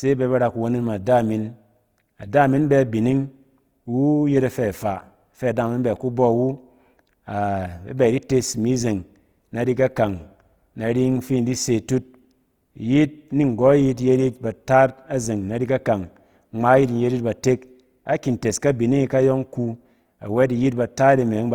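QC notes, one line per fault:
Throughout: Opus compression. The speech has a plainly audible rough, grainy texture, with noise filling the upper bands rather than leaving them hollow. The bandwidth stays full, with nothing above about 20.2 kHz. This is likely Opus in its music (CELT) mode at a rate around 24 kbps, keeping each band's energy and patching starved bands with folded or noise content. That gives grit rather than the swirling, holey sound of MP3.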